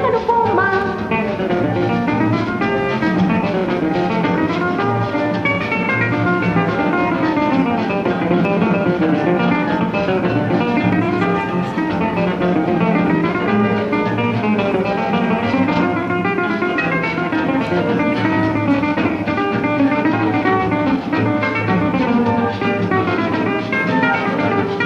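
No technical faults can be heard anywhere in this clip. The sound runs without any audible break or disturbance.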